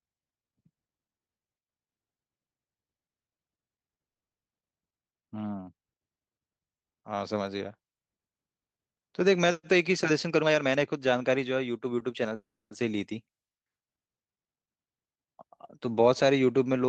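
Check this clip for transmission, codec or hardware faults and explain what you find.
Two faults sit back to back in the second half of the speech, over a call path whose band tops out near 8 kHz, which fits Opus at a modest bitrate.

Jitter buffer speed-up, 9.73 to 12.32 s: the receiver had banked more audio than its target and trimmed it by cutting out short pitch-period chunks repeatedly, about a third of a second in all. Speech runs at 112% speed with pitch unchanged and sounds rushed.

Call audio freeze, 12.35 to 12.73 s: the sound stalls for 0.36 s, with a brief fading continuation and then about 0.27 s of silence, before resuming exactly where it stopped with nothing lost. The likely cause is delayed packets draining the jitter buffer.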